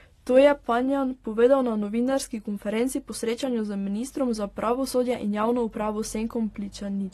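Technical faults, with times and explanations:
Throughout, AAC compression: the speech sounds dull and smeared, with plainly audible codec damage and nothing above 13.8 kHz. This is likely low-bitrate AAC-LC, consistent with about 32 kbps, where coarse quantisation of each frame's spectrum and a lowered cut-off strip away the top end.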